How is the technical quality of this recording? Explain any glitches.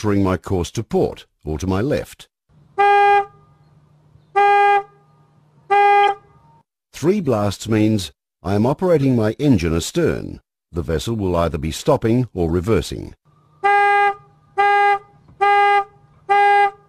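The recording has four brief glitches, all of one kind. Corrupt frame decoded: damaged compressed frames were decoded anyway, so misread gains and codes sprayed energy into wrong frequencies. The result is short chirps and noise bursts at 6.03–6.11 s (loudest, peaking around -5 dBFS), 7.25 s (faint), 9.01–9.03 s and 12.48–12.51 s.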